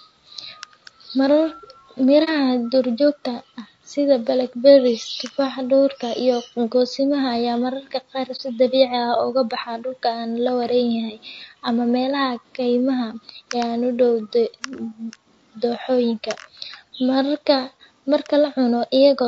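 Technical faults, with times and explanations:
Throughout: low-delay AAC compression, likely AAC-ELD at 32 kbps; short frames smear pitch harmonics, leaving the speech plainly rough and grainy with noise between harmonics.
2.24 s and 8.36 s: AAC frame loss with muting; one lost frame each time was zeroed, so the speech fades into a brief 30 ms dip, before "duurjoogta ah sida blackberries" and after "goosimo ayaa mararka qaar".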